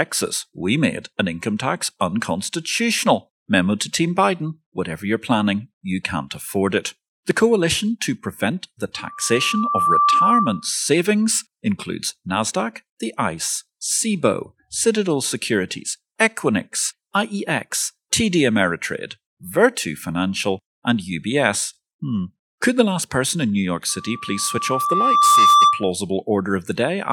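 From 8.95 to 10.70 s and again from 23.89 to 25.91 s, a loudspeaker feedback squeal swells over about a second, then a second and a half, into a 1.2 kHz tone that rises a few dB, then about 10 dB, above the speech. The microphone is picking up its own loudspeaker, and the loop runs away at that frequency. On a spectrogram this shows as a single horizontal line at 1.2 kHz that brightens as it grows.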